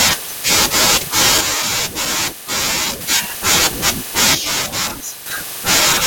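One channel drops out from 1.41 to 3.01 s and again from 4.35 to 5.26 s: the speech suddenly falls by about 6 dB, then snaps back. This is likely a lost stereo channel, which leaves the mono sum carrying only half the shared signal.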